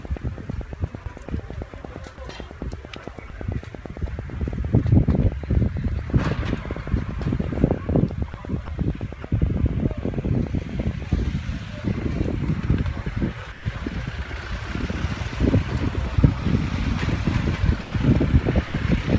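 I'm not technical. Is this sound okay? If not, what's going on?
No. For the first 11 seconds, from 0.05 s to 11.1 s, there's a steady ticking, about nine clicks a second, roughly a hundred in all. This train of clicks is likely electrical interference from nearby equipment or a faulty connection or power supply adding pops.

The sound also briefly drops out and is replaced by a soft, even hiss or near silence at 3.28–3.30 s, 8.66–8.68 s, 9.22–9.24 s, 13.52–13.66 s, 16.16–16.18 s, 17.82–17.94 s and 18.68–18.74 s. This is sound dropped by the voice detector, which likely mistook real sound for background and stopped sending, so the receiving end filled the gaps with comfort noise.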